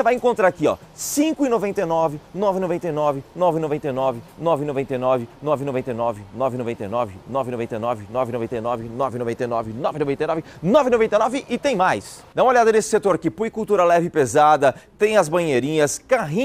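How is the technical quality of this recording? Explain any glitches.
Nothing here sounds off: there are no glitches to speak of, and the recording holds up steadily all the way along.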